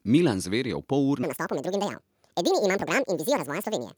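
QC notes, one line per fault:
1.23–3.98 s, section at the wrong speed: playback likely switches to a mismatched clock here and runs the audio at 1.79 times its recorded rate. From that moment to the end, the speech jumps up nearly ten semitones, sounding hurried and squeaky.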